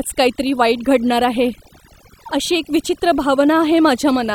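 Throughout, overdone noise removal mutes bands near the noise estimate, leaving near-silent gaps with twinkling specks; spectrograms show scattered isolated blobs between harmonics.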